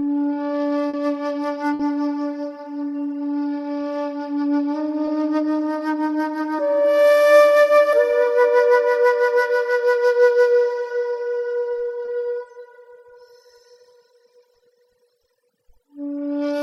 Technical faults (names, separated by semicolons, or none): short concealed packet loss; burst of packet loss